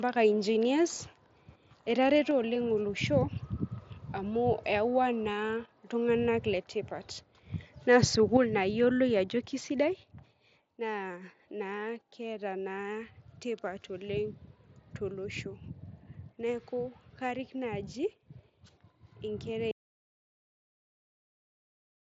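At 2.31 s, just before "oleng olosho", the level drops by about 3 dB in a single step, and it drops again by about 1 dB at 6.54 s, right after "amu eyawua naa iltunganak". These are microphone volume stepped down events: voice and background fall together, likely because the call software's automatic gain control pulled down the device input.

Between 7.94 and 8.04 s the loudest syllable carries a brief harsh, crackling edge from microphone overload. The peaks likely ran about 1 dB past the converter's limit and had their tops flattened on a small fraction of samples.

At 8.37 s a third step-down follows, a sharper cut of about 6 dB, which fits the gain control reacting to that overload.

From 19.71 s to the end the audio is an audio dropout to silence. It is silent with no room tone, likely from the input device or link being lost while recording continued. Under all of this the wideband Bluetooth mSBC headset path is audible, with nothing above about 7.7 kHz.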